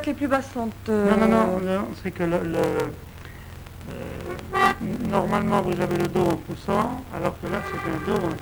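From 2.5 s to the end, a block size mismatch (padded) sets in. Each block written is shorter than the stage reading it, which fits a 1024-sample read, so zeros fill the remainder. This causes a 43.1 Hz buzz and a slowdown to 0.861 speed, yet the timbre stays, unlike a sample-rate error.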